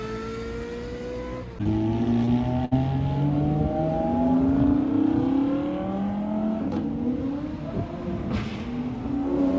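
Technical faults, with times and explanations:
1.64–1.67 s and 2.25–2.29 s, short concealed packet loss: about 20 ms of audio never arrived each time. The receiver extended the preceding sound, leaving brief smears.
2.65–2.73 s, burst of packet loss: 60 ms went missing. The receiver stretched and faded the last sound into a short held buzz or hiss, then resumed further on.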